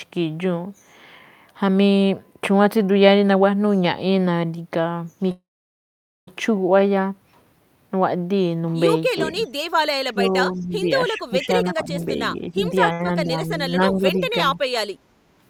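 This is a speech clip with several call-path faults, most of them in its second half.

The first is a call audio freeze from 5.31 to 6.29 s. The sound continues briefly as a fading fill and then goes silent for about 0.84 s before resuming exactly where it stopped. Nothing is lost, and the delay grows by nearly a second. The likely cause is packets held up in transit until the jitter buffer ran dry. What separates it from a dropout is that the audio picks up intact after the gap rather than skipping ahead.

Echo leak appears as two faint scraps, at 9.45 s and at 10.60 s, each about 50 ms long. Both are copies of earlier sound arriving 359 ms late and sitting about 40 dB below the speech. They are likely residue that a loudspeaker-side echo canceller failed to remove. The fixed 359 ms lag behind the original is what marks them as echo rather than reverberation or crosstalk.

From 10.08 to 14.58 s the speech is suppressed in double talk. 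Roughly two seconds in total are pulled down, by up to around 10 dB, in patches while the far side is also active. The likely cause is an echo canceller that could not tell the local talker from the loudspeaker echo and attenuated both. Unlike a level drop in the recording, these dips come and go with the overlap.

Jitter buffer speed-up runs from 11.50 to 11.99 s and again from 12.47 to 12.92 s. Each stretch plays at 117% speed with the pitch unchanged, removing roughly 0.1 s of excess buffered delay by trimming pitch-period-sized pieces. The unchanged pitch is what separates this from a sample-rate mismatch, which would shift pitch along with speed.

Right after the second speed-up comes a short stall from a late packet, at 12.93 to 13.01 s. About 65 ms is filled by stretching the last sound, which is held slightly too long with a slight buzz or dip, and nothing is missing. It is far shorter than the earlier freeze and never reaches silence.

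Finally, background gated by the echo canceller affects 14.93 to 15.36 s. The room sound drops by about 10 dB for roughly 0.4 s while the loudspeaker plays, then returns. It differs from the double-talk suppression in that it is the ambient floor that ducks, not the talker.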